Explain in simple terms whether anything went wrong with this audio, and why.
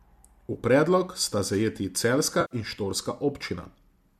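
Two brief glitches come from AAC frame loss with concealment. At 0.53 to 0.56 s, just before "predlogu sta zajeti celjska", about 20 ms of audio went missing, and at 2.41 to 2.55 s, right after "predlogu sta zajeti celjska", about 100 ms did. Each time the decoder filled the hole by reusing the last good sound, so you hear a short smeared, noisy patch rather than a hard silent gap or click. That smearing is what sets it apart from a plain dropout. The sound was likely carried by a low-delay AAC codec.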